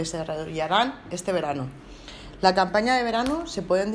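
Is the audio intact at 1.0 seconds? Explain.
Yes, the audio is intact at 1.0 seconds, with no fault present at that moment.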